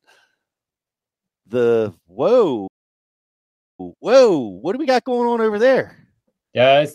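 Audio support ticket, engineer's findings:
Playback stall, 2.67 to 3.80 s. Speech cuts out mid-flow for about 1.1 s of silence, then resumes. Likely cause: player buffer ran dry or its output thread was blocked, leaving nothing to send until data returned.

Time-compressed catch-up, 3.80 to 6.80 s. Speech runs hurried at 1.15x, pitch unchanged. Player draining its post-stall backlog by dropping short slices and cross-fading the joins, until the backlog is cleared.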